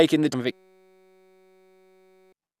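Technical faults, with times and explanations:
0.32 s, damaged data in a compressed stream: corrupted frames make the decoder lose sync, giving a brief glitch that appears as a narrow broadband smear on the spectrogram.
0.52 to 2.33 s, system hang loop: a frozen system replays one 5.33 ms buffer, likely 256 samples, as a 188 Hz buzz. The spectrogram shows harmonic stripes, the waveform a repeating pattern, and roughly two seconds of speech are lost.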